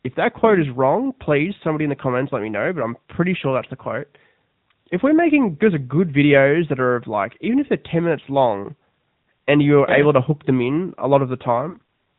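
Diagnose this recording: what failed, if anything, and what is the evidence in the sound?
Throughout, the speech is muffled and dull, with nothing above 4 kHz, and voiced sounds take on a buzzy, synthetic edge. This is the codec stage: the AMR narrowband mobile codec resynthesises the voice from a vocal-tract model at 8 kHz sampling, and the plainly audible roughness points to a higher mode around 10.2 kbps.

At 11.70 to 11.78 s the speech briefly smears into a held, warbling tone that sags in level, then returns slightly rough. This is a network fault, lost AMR speech frames. The decoder repeated the last good pitch and vocal-tract settings with falling gain, and the 40 ms gap fits two dropped 20 ms frames.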